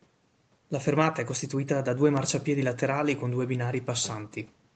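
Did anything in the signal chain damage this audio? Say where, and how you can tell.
No, the speech shows nothing damaged along the way: it carries the expected character of a call chain, with the low bass removed by the microphone processing and no content above 8 kHz, consistent with a wideband call codec setting.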